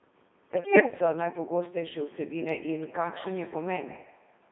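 A speech clip carried throughout by the Codec 2 vocoder at about 2.4 kbit/s, with heavy codec damage. The voice is rebuilt from sine waves driven by pitch, voicing, energy and a coarse spectral envelope, so it comes out buzzy and robotic. On a spectrogram the energy sits between 200 Hz and 3.7 kHz as unnaturally regular harmonic combs with smeared formants, and the waveform shows synthetic periodic pulses rather than the original shape. From 0.56 to 0.92 s there are bit errors on digital voice radio, at roughly one bit in twenty. Because each bit in so lean a stream sets pitch, level, voicing or timbre for a whole frame, the voice lurches into warbling bleeps and gibberish. That run fits about fifteen corrupted frames. The spectrogram shows the harmonic stack jumping abruptly in spacing and brightness block by block, and the waveform shows sudden steps in amplitude at frame boundaries.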